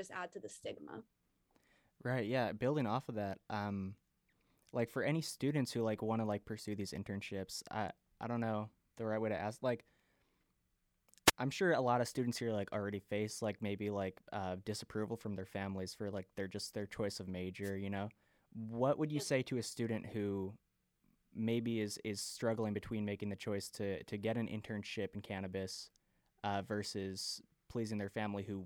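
Two brief bursts of static cut through the speech, at 11.26 to 11.31 s just before "I'm sure a lot" and at 17.62 to 17.71 s right after "just their choice of". These are wireless microphone noise hits: the FM radio signal faded as reflections cancelled, letting receiver noise rise.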